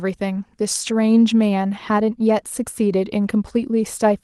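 No technical faults are audible.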